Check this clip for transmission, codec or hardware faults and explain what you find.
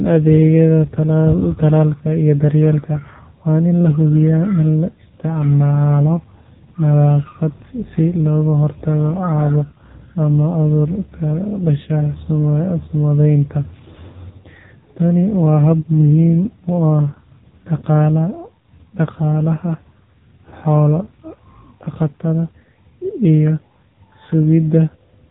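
The speech has been carried through the AMR narrowband mobile codec for the entire clip. The signal was squeezed into an 8 kHz-sampled telephone channel, so nothing above 4 kHz survives. Each 20 ms frame was rebuilt from a vocal-tract model excited by only a handful of pulses. The damage is heavy: voices sound buzzy, thin and synthetic, with a muffled, band-limited edge. That degree of coarseness points to one of the lower AMR modes, around 6.7 kbps.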